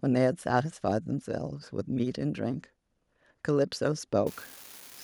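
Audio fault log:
4.27–5.04 s, unreliable data bit: one marginal data line flips its bit at random, adding equal-size spikes heard as a continuous crackling fizz to the end.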